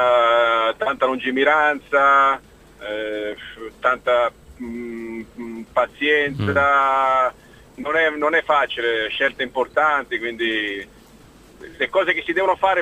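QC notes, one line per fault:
No faults heard in this clip. Nothing needs flagging for QC.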